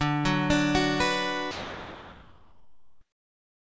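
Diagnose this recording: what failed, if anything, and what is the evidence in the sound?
The failure sits in call processing, at the sender's voice detector, which likely misjudged real sound as background and stopped transmitting. From 1.51 s to the end of the clip, about 2.2 s of audio is replaced by steady comfort noise, and roughly 0.9 s of genuine sound is lost under it. The noise never gives way to returning sound. Across the clip, nothing is heard above 8 kHz, which fits a G.722 call codec.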